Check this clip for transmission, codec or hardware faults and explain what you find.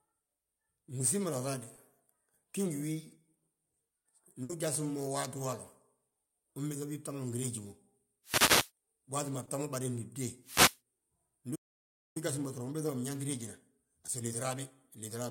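Several transmission and playback faults affect this speech clip: two brief concealed packet losses, one longer loss burst, two wireless microphone noise hits, a playback stall, and a stretch of time-compressed catch-up.

Short concealed packet loss occurs at 1.75–1.79 s and again at 9.45–9.49 s. Each time about 20 ms of audio failed to arrive, and the decoder bridged the hole by extending the preceding sound before blending back. Both are heard as a tiny smear or wobble in the speech.

A burst of packet loss occurs at 4.43–4.51 s, where roughly 60 ms went missing in a row. The receiver kept synthesising the last sound while fading it, so a held buzz or fading hiss replaces that stretch and the speech picks up further along.

Wireless microphone noise hits occur at 8.24–8.71 s and 10.42–10.79 s. The analogue FM radio link faded, so receiver noise rose and broke through the signal. Each one sounds like a short swish or burst of static laid over the speech.

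A playback stall runs from 11.55 to 12.17 s, leaving about 0.6 s of silence in mid-flow. The sound simply cuts out and then resumes. The likely cause is the player running out of buffered data or its output thread being blocked.

Time-compressed catch-up follows from 12.17 to 15.17 s. The player works off its backlog by dropping and cross-fading small fragments, running at about 1.15 times normal speed. Pitch stays unchanged, but the speech sounds hurried.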